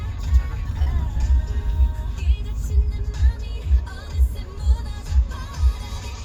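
At 0.83 s, running to about 0.88 s, there is a short concealed packet loss. Roughly 40 ms of the stream failed to arrive in time, and the receiver papered over about 35 ms of it by extending the preceding sound before crossfading back into the real signal. It comes across as a brief smear or wobble. On a spectrogram the stretch shows smoothed, repeated texture without fresh onsets; the waveform shows a short, too-regular patch with a soft join.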